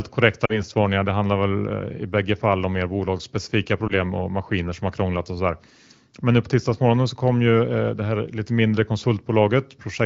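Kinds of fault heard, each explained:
Lost AMR speech frames: The speech briefly smears and dips from 0.45 to 0.63 s, dropping toward near silence before it recovers slightly rough, and a shorter warble follows at 3.87 to 3.93 s. Radio errors corrupted speech frames, so the AMR-WB decoder, running at 15.85 kbit/s, filled each gap by repeating the last good pitch and vocal tract settings at falling gain. The first dip fits about two missing 20 ms frames, the second one.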